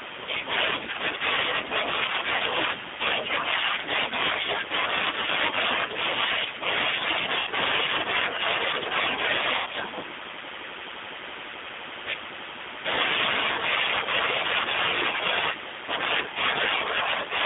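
The whole clip runs through the G.729 codec at 8 kbit/s, and you can plainly hear it. The line band sits roughly between 200 Hz and 3.6 kHz, so everything feels boxed in. Because the decoder rebuilds the speech from a vocal tract filter, a pitch predictor and a handful of pulses per short frame, the voice comes out a bit rough and synthetic.

There is VoIP packet loss concealed by the speech codec at three points. The first is at 2.36 to 2.43 s, where about 40 ms went missing, which fits two 20 ms packets. The next two are at 7.39 to 7.50 s and 9.58 to 9.69 s, each about 80 ms long. In each gap the decoder keeps extrapolating from its last pitch and filter while turning the gain down. You hear the sound smear into a buzzy tone or a coloured noise that fades. Since every frame builds on the one before, the voice stays weak and off just after each gap ends.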